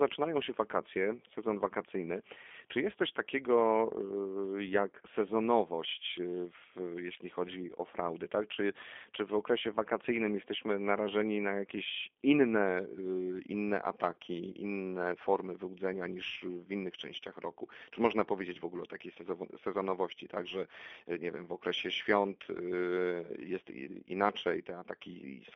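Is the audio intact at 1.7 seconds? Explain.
No. The G.729 codec, running throughout, rebuilds the speech at about 8 kbit/s from a vocal tract filter and sparse pulses. The line is limited to 250 Hz to 3.5 kHz, so at 1.7 seconds the speech sounds muffled, rough and synthetic.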